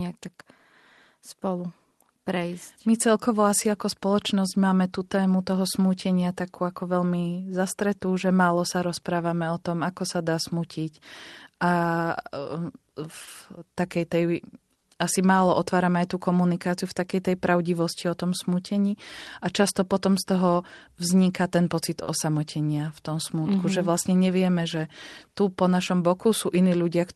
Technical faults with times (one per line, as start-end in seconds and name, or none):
13.24-13.29 short stall from a late packet
14.78-14.83 short stall from a late packet
22.03-22.09 short stall from a late packet